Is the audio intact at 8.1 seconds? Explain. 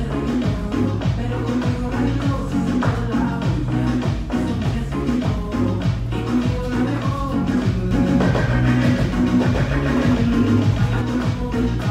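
No. From 7.91 s to 11.01 s there is a doubled audio track: a second full-band copy of the sound trails the original by about 150 ms at roughly the same level, likely from a slower capture path or a misaligned edit. It sounds like a dry, slapback echo with no room tail, cutting in and out abruptly. On a waveform every onset appears twice; a spectrogram shows each event smeared into a matching ghost shifted right.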